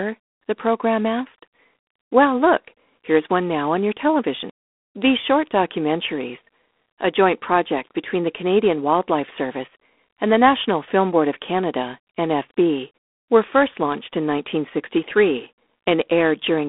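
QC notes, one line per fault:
Throughout, G.726 ADPCM: coarse difference coding, consistent with 24 kbit/s, leaves a rasping hiss tracking speech level; spectrogram shows a 250 Hz to 3.5 kHz band, empty above 3.8 kHz.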